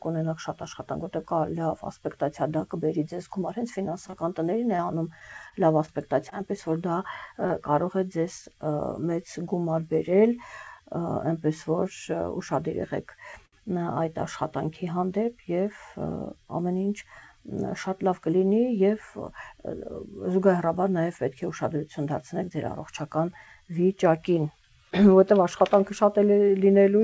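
From 3.84 to 6.33 s there are scattered short gaps: about seven small holes where packets were lost or late, the longest around 30 ms, with about 80 ms of audio missing in total. The receiver covered each hole by extending the preceding sound, leaving brief ticks, smears and hiccups across that stretch.

At 7.47 to 7.52 s a short concealed packet loss drops about 20 ms of audio. The decoder fills roughly 25 ms with a continuation of the last sound and then blends back into the real signal, producing a quick smear or wobble in which a short transient can disappear.

At 13.46 to 13.54 s a short stall from a late packet occurs. The jitter buffer ran dry, so the receiver held the current sound for 69 ms until the packet arrived, then resumed from the same point. Nothing is lost, but that moment is drawn out with a faint buzz or dip, and all of this sits on a band-limited call path with nothing above 8 kHz.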